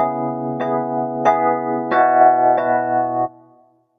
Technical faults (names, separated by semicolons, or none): noise suppressor applied to music or sounds